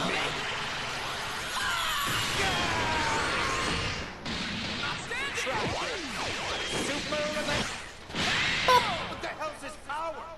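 Damaged data in a compressed stream appears twice, from 4.93 to 4.98 s and from 7.57 to 7.64 s, each lasting about 60 ms. At both points part of the encoded data is corrupt, so the decoder misreads those frames, loses its place in the stream and has to hunt for the next valid frame header before normal playback resumes. What reaches the ear is a short, harsh blip or chirp breaking into the sound.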